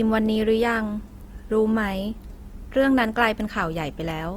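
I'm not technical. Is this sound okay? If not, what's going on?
No. The audio was likely squeezed hard by Opus compression, a method that shrinks files by keeping only a rough outline of each slice of the sound and filling the gaps with approximations or noise. Here that damage is plainly audible from start to finish: the speech sounds rough and grainy rather than clean, with a noisy texture clinging to it. It isn't muffled, because the high end is still present.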